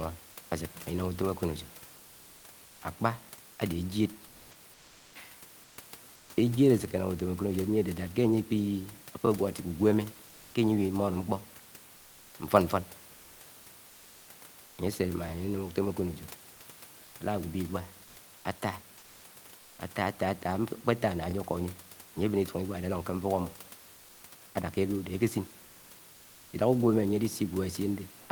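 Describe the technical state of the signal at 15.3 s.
Overlapping chunks at 15.29 to 15.31 s: the speech was handled in 6-second chunks, and this one begins about 23 ms before the previous chunk finished, so that sliver plays twice, heard as a brief click or stutter above the low room noise.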